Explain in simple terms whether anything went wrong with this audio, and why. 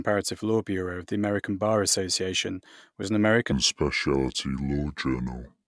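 Wrong sample rate from 3.52 s, after "was an": the speech is played back too slowly, at 0.69 speed, so it drags and drops about 6.5 semitones lower.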